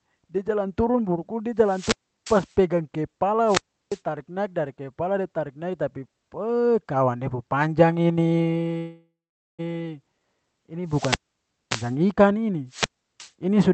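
Wireless microphone squelch dropouts occur at 1.59–2.57 s, 3.44–4.02 s (ending just before "naik dari"), 10.85–11.97 s and 12.67–13.32 s. Each time the FM radio signal fades, hiss rises briefly, then the receiver's squelch mutes the output for about 0.34–0.58 s before the speech returns. From 8.77 to 9.61 s the sound stalls into a fading buzz and then 0.45 s of silence, likely a call audio freeze caused by the jitter buffer running empty while packets were delayed. The speech then resumes where it stopped, so 0.81 s of delay is added and nothing is lost.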